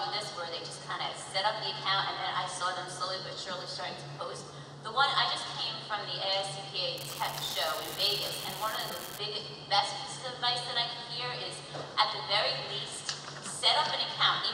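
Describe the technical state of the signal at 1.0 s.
At 1.0 s the signal is intact, with no audible technical fault at that moment.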